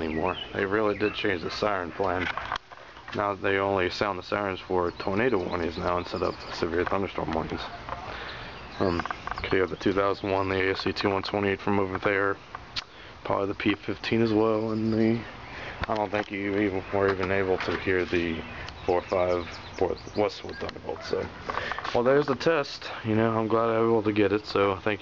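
No technical faults are audible.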